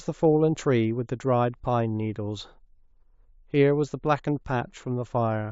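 A speech recording with nothing technically wrong with it.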